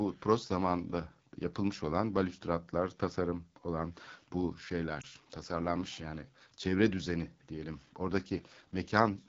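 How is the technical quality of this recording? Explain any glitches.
The recording has clearly degraded technical quality, with persistent codec damage throughout and one short glitch.

AMR wideband (HD Voice) codec: Across the whole clip the speech sounds rough and raspy. This fits AMR-WB's low 8.85 kbit/s mode, where a pulse-driven vocal tract model misses fine detail and noise fills the band above 6.4 kHz.

Lost AMR speech frames: From 5.01 to 5.06 s there is a brief dip or warble in the speech. It fits a single lost 20 ms frame. The decoder repeated the previous pitch and vocal tract settings at reduced gain, so the sound recovers weak or rough for a moment.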